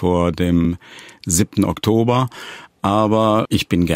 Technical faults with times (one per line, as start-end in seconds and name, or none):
0.65 repeated buffer